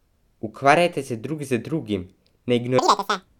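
At 2.79 s the speech suddenly jumps to double speed and rises a full octave (12 semitones), and it stays that way until the clip ends at 3.39 s. This is audio read two samples at a time (double speed). The reader is treating each pair of samples as a single frame, as if the stream were two-channel or used samples twice as wide. Playback therefore runs twice as fast.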